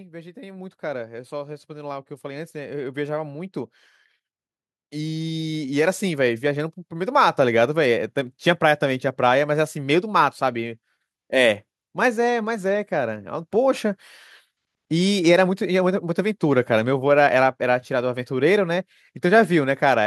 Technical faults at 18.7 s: none

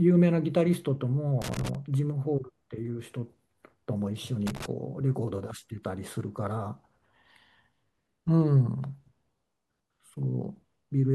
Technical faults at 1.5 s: loose connector crackle

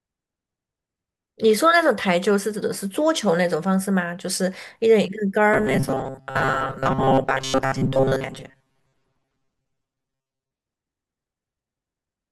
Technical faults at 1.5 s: none

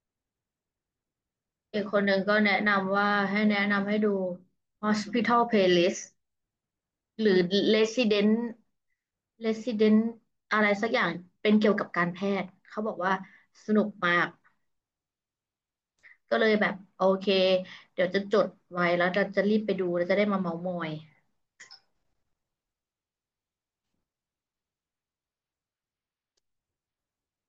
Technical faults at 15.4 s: none

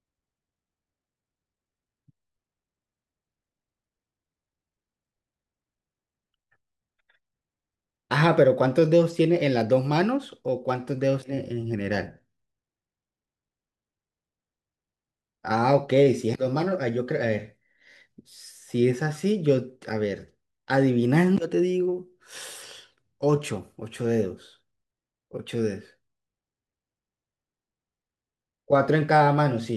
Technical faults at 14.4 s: none

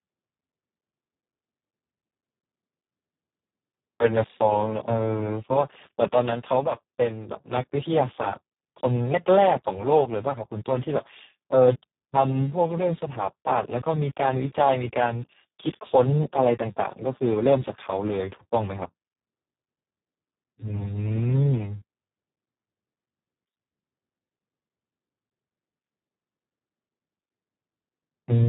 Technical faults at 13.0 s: Speex codec

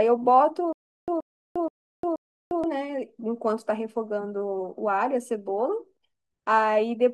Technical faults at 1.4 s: stutter with silent gaps

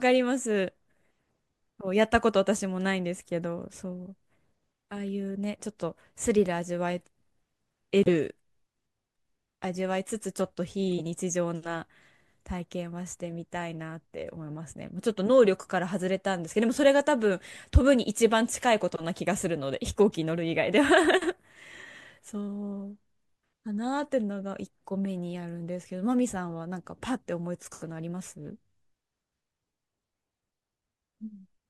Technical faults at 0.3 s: none

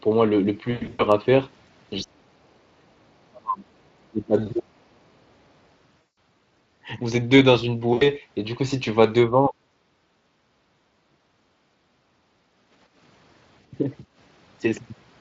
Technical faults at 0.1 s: none

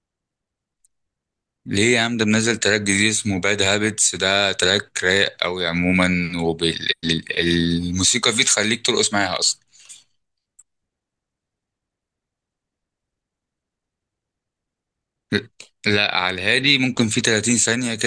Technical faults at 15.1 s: none

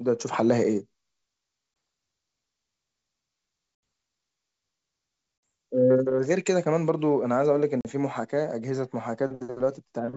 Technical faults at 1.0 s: none

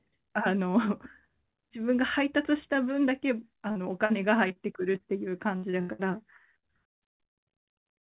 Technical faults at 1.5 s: none

